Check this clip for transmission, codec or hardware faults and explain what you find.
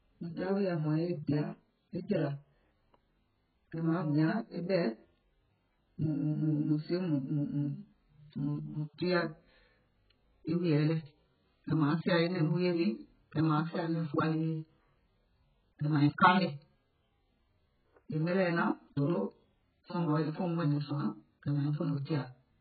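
One fault runs through the whole speech clip: AAC compression. Nothing is present above 4.5 kHz, and the heavy damage points to a very low bitrate, around 8 kbps. The likely cause is an AAC-LC encoder that, with so few bits, drops the upper band and quantises the remaining frequency lines coarsely frame by frame. The result sounds dull and smeared, with warbling, fizzy sibilants. Unlike a simple low-pass filter, it adds that unstable, watery texture, not just missing treble.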